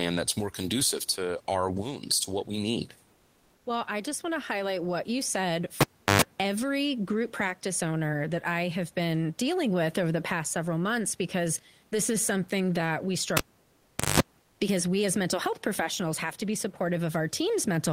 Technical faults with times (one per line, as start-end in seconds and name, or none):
3.15-3.63 comfort noise in place of the background
5.81-6.22 cable pulled and plugged in
13.37-14.20 cable pulled and plugged in
14.43-14.59 comfort noise in place of the background